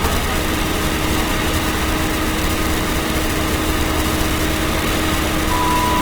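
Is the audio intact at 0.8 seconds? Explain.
No. At 0.8 seconds the sound carries Opus compression artefacts, and they run through the whole clip. Tones come out rough and grainy rather than clean. The damage is plainly audible. The likely cause is Opus in its music (CELT) mode at a low bitrate, which fits about 24 kbps. Starved of bits, the encoder refills bands by folding lower ones or with noise. Bandwidth stays full, reaching about 20.2 kHz.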